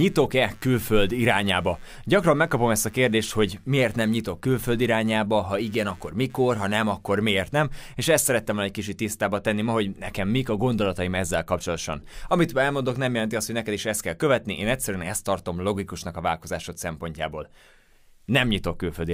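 From the start to about 7.11 s, just before "miért nem és ezt", there is computer activity noise: a buzzing, scratching layer pulsing at around 100 times per second and sitting roughly 35 dB below the speech. It rises and falls independently of the talking, following the machine's own workload. Current drawn by the processor or graphics hardware shifts the ground reference shared with the audio circuitry, and those shifts leak into the recorded signal.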